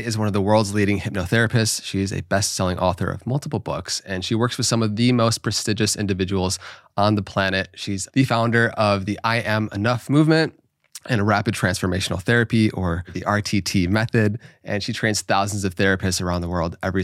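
Nothing in this speech recording stands out as a technical fault at any point, so there's nothing to flag.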